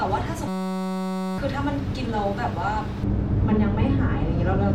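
From 0.48 to 1.38 s the speech gives way to a system hang loop: the computer or driver stalled while the hardware kept replaying one 5.33 ms slice, which fits a 256-sample buffer. It sounds like a steady 188 Hz buzz, and roughly a second of audio is lost. The waveform shows an identical short cycle repeated, and the spectrogram shows harmonic lines at 188 Hz.

From 3.03 s to the end, de-emphasis applied wrongly cuts the treble with no matching boost upstream, leaving the speech dull and muffled. The response falls smoothly to about 11 dB down at 10 kHz relative to 1 kHz, so the spectrogram's upper bands fade progressively.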